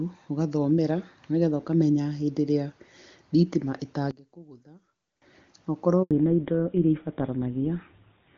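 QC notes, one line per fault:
4.11 to 5.22 s, one channel inverted: the speech collapses by about 23 dB into a faint residue, likely because one stereo channel has reversed polarity and the shared centre content cancels in the mono sum. The waveform shrinks abruptly.
6.03 to 6.11 s, handover gap: the call switches networks, no speech frames arrive, and the sound fades within a few tens of milliseconds into silence, for a gap of 80 ms in all. The waveform shows a flat stretch after a brief decay, and the spectrogram shows an empty vertical strip across all frequencies.
6.11 s to the end, fallback to narrowband: the call drops from AMR-WB (HD Voice) at 23.85 kbit/s, which had shown no more than faint codec damage up to this point, to GSM full rate at 13 kbit/s. Everything above 4 kHz disappears, so the speech sounds duller and rougher. The spectrogram shows a hard ceiling at 4 kHz.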